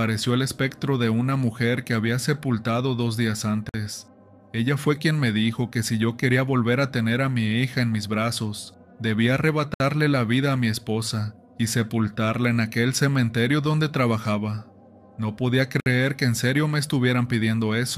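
Gaps at joins of encoded pieces occur at 3.69–3.74 s (about 50 ms), 9.74–9.80 s and 15.80–15.86 s (about 60 ms each), one every 6 s. Separately encoded segments were butted together untrimmed, so encoder start delay and final-frame padding leave smeared silences before the sound resumes where it stopped.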